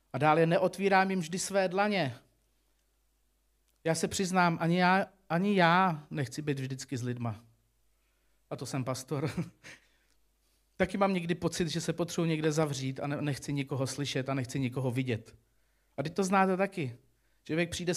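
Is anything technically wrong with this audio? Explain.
Yes. Between 12.44 and 12.65 s, a sudden voltage step, likely from a plug, switch, static discharge or driver glitch, entered the signal chain, producing a loud pop: two sharp thumps in quick succession, somewhat louder than the speech, which continues underneath.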